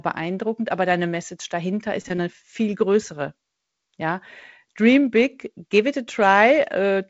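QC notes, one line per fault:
The speech carries the band-split character of G.722 wideband telephone coding, with content reaching up to about 7.7 kHz and only light coding texture in both bands, which fits the codec's 48 kbit/s mode.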